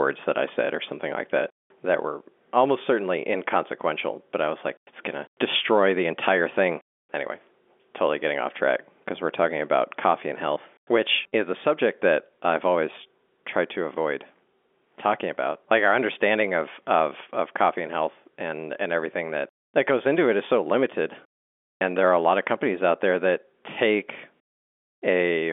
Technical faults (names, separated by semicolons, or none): packet loss with pitch repetition